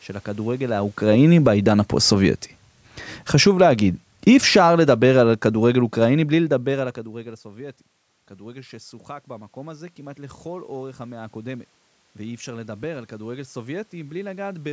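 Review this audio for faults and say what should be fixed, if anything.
Automatic gain falling occurs twice: from 0.41 to 2.27 s the level sinks by about 5 dB, and from 3.19 to 6.98 s by about 10 dB. The control judged the input too loud and turned its gain down gradually, so the voice and the room noise behind it drop together. That shared drop distinguishes it from a talker moving, which happens near 0.5 and 6.5 s and leaves the background steady. Prevention: give the gain control a slower attack, or set the input level so it doesn't start out hot.

Automatic gain rising appears from 1.6 to 2.49 s by about 3 dB, from 3.6 to 4.04 s by about 4 dB, and from 7.14 to 14.68 s by about 8 dB. In the last case the input fell by about 19 dB, and the control slowly pushed its gain back up. The room noise swells along with the voice over these stretches. A talker moving closer would raise only the voice, and would do so quickly. 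Prevention: limit how far and how fast the gain can climb during quiet passages.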